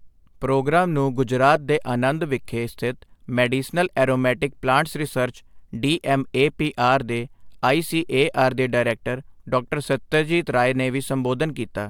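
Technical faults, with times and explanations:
No technical faults can be heard in this speech recording. There are no times to list.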